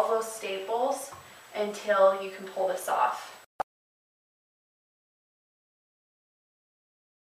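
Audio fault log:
Nothing to log here, as no faults turned up anywhere in the audio.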